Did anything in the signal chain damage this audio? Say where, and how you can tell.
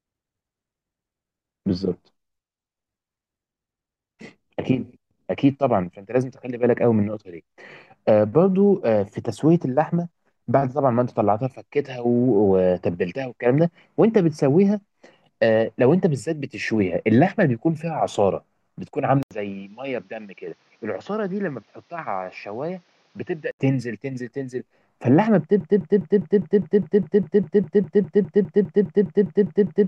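Yes. From 19.23 s to 23.59 s the sound turns dull and boxy, with nothing above 6.9 kHz, a drop of roughly 10 dB and a new, faint noise floor, after an 80 ms gap at the switch. This is likely the input switched to a poorer device, at the driver or device-selection stage.

From 25.61 s to the end, a 203 ms fragment repeats back to back 21 times, exactly identical each pass, and the audio that should follow is lost. This broken-record loop likely comes from a stalled buffer in playback or streaming that kept resending its last fragment.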